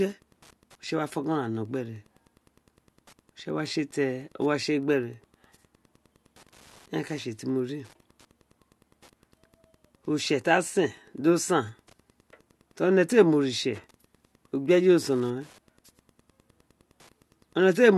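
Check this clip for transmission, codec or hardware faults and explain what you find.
One hardware fault is present, and it lasts the whole clip.

Wi-Fi interference runs from start to finish. A Wi-Fi radio close to the audio circuitry sends a beacon every 102.4 ms, and the circuit rectifies each burst into the signal. The result is a steady ticking just under ten times a second, sitting roughly 35 dB below the speech.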